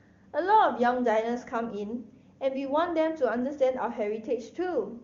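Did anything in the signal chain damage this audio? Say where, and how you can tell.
No, nothing in the chain has damaged this speech. It has been carried by the AMR wideband (HD Voice) codec at 23.85 kbit/s, its highest rate, where any trace of the coding is faint at most.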